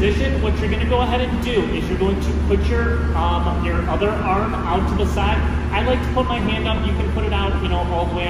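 Nothing stood out as a technical problem on listening to the audio.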